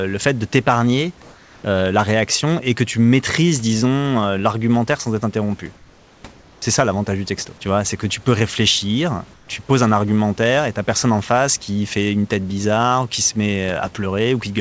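At 1.22 to 1.64 s, between "le fait de t'épargner" and "euh la réaction et", the room background turns into flat, featureless hiss about 2 dB quieter. That's comfort noise in place of the background, likely from discontinuous transmission: the sender went quiet in the pause and the receiver filled the gap with synthetic noise. It happens again after "l'argumentaire sans être interrompu" at 5.76 to 6.24 s and 6.32 to 6.62 s (about 3 dB down), just before "ça l'avantage du texto", and at 9.34 to 9.48 s (about 5 dB down). The sound stops above 8 kHz, which fits a G.722-style call path.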